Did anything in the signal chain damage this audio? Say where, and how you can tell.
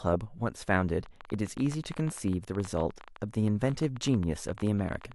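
Yes. A train of clicks runs from 1.06 s to 5.13 s, about fifty irregularly spaced pops at roughly 14 per second, as loud as the speech, likely from interference in the analogue wiring or interface. Spectrograms show thin vertical broadband lines, and waveforms show sharp spikes.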